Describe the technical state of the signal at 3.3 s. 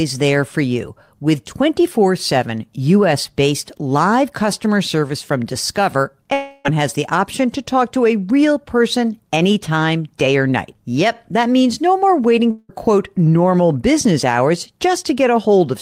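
At 3.3 s the speech signal is intact, with no fault audible at that moment.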